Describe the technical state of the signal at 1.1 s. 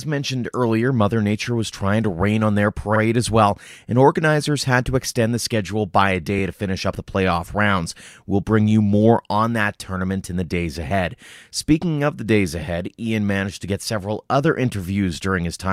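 At 1.1 s the speech signal is intact, with no audible dropout, distortion or other technical fault at that point.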